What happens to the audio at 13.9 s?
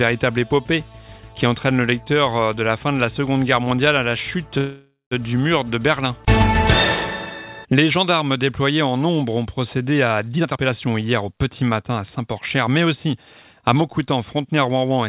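A jitter buffer speed-up runs from 13.75 s to 15.08 s, covering the moment at 13.9 s. The receiver's buffer had built up more audio than it aims to hold, so it trimmed short pitch-period-sized slices again and again to catch up, removing about a tenth of a second in total. The sound plays roughly 7% fast at unchanged pitch, giving a slightly hurried feel, while the call path's 4 kHz bandwidth limit stays as before.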